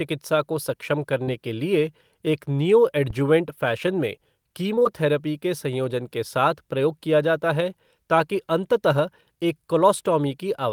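At 1.23 s, just after "को सक्षम", short concealed packet loss: about 40 ms never arrived, and the decoder extended the previous sound to cover it. It is heard as a brief smear and shows on a spectrogram as smoothed, repeated harmonics.

At 3.10 s, before "फ़ैशन में", a phantom power thump: a supply switched on or off on the live input sent a voltage step through the coupling capacitors. It is a deep thump decaying over about 110 ms, seen as a large low-frequency swing in the waveform.

At 4.75, 4.79 and 4.83 s, ending before "के संयोजन के", three consecutive 20 ms gaps were concealed back to back. The result is a wobble, with blurred, stretched spectral bands.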